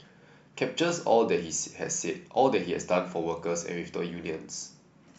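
Speech recording with no audible technical faults at any point.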